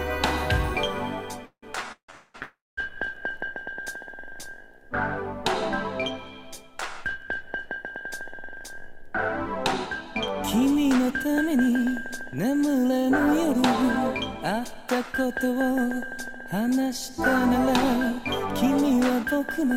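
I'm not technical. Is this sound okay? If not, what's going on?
No. Four call audio freezes, at 1.45 to 1.64, 1.92 to 2.10, 2.10 to 2.36 and 2.42 to 2.79 seconds, make the sound stall, fade and resume. Delayed network data is the likely cause.

Jitter buffer speed-up makes the sound run about 6% fast from 8.31 to 15.37 seconds, trimming nearly half a second. It runs about 5% fast from 16.89 seconds to the end.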